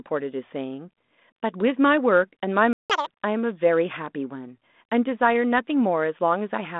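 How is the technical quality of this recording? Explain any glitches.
The recording has one clear glitch: a short dropout followed immediately by a sped-up burst. It sits on a telephone-band G.726 line at 32 kbit/s, which caps the sound near 3.6 kHz and adds only light codec roughness.

At 2.73 s the speech cuts to silence for about 0.17 s, until 2.90 s. This is a playback stall, most likely the player running short of buffered data or having its output thread held up, so nothing reached the output until it recovered. It differs from a packet-loss gap because nothing is concealed or smeared across the hole. The output is plain digital silence, and the sound resumes from where it stopped instead of skipping ahead.

From 2.90 s to 3.07 s the speech plays at double speed, a catch-up at higher speed. The player resamples the backlog that built up during the stall to win back the lost time, so pitch rises with tempo, by about ten semitones, giving a brief chipmunk quality before normal rate returns. 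A time-stretch recovery would keep the pitch steady. Here it jumps, and the burst lasts about as long as the silence it repays.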